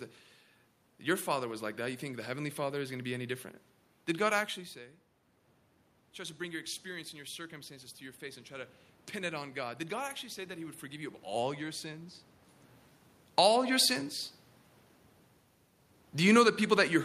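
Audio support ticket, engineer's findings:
Automatic gain rising, 6.16 to 12.07 s: AGC reacts to an input drop of about 14 dB by raising gain about 6 dB over roughly six seconds; speech and room noise swell together. Second rise 13.45 to 13.94 s, about 5 dB, faster swell.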